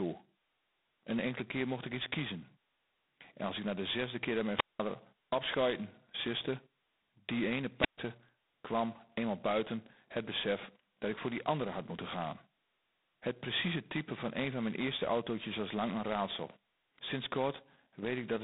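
From start to finish the speech carries a harsh, rasping hiss that rises and falls with the level of the talking. It sits in a narrow telephone band of roughly 200 Hz to 3.7 kHz, with nothing at all above 3.8 kHz. This is heavy G.726 ADPCM damage. The codec sends only a coarse difference from a running prediction of each sample, and a grain this rough fits the 16 kbit/s mode. With that few bits, quantisation noise rides on every syllable.

At 4.54 s, just after "de zesde keer dat", there is a short burst of hiss, then a hole of near silence lasting about 0.19 s, and the speech returns at 4.80 s. The same thing happens at 7.77 s after "siste die ene", with a gap of about 0.13 s before sound resumes at 7.98 s. Both are wireless microphone squelch dropouts. The radio link from the FM microphone faded, and the receiver's squelch cut the output until the signal came back.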